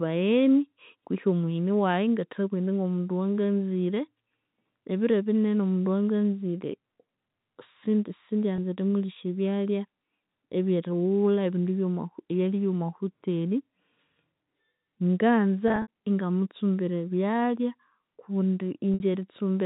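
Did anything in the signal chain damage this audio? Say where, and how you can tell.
Yes. The damage is on the network: packet loss with pitch repetition, where the receiver covered missing audio by repeating the last pitch period. At 8.56 to 8.58 s about 20 ms went missing, which fits a single lost packet and sounds like a brief buzzy hold. From 15.68 to 15.88 s about 120 ms dropped out, scattered over 200 ms, with the longest gap about 60 ms. The tone stutters and fades before "ingamutsumbira ebyalya". At 18.94 to 19.00 s a 60 ms gap fades toward silence.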